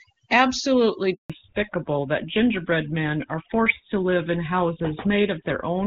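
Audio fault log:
Throughout: overdone noise removal. The background sinks to near silence dotted with twinkling specks. A noise reducer set far too hard is switching individual frequency bands down or off whenever they sit near its noise estimate, and quieter parts of the speech are cut along with the noise.
1.14 to 1.30 s: handover gap. The speech fades out within a few tens of milliseconds and stays silent for 160 ms before returning. The call was passed between networks, no speech frames arrived during the switch, and whatever was said in that window is gone.
1.30 s to the end: fallback to narrowband. From the moment the speech resumes it sounds duller and rougher, with nothing above 4 kHz. The call dropped from the wideband link to an older narrowband codec, which fits GSM full rate at 13 kbit/s. The earlier wideband stretch, which fits AMR-WB at 23.85 kbit/s, has no more than faint codec damage.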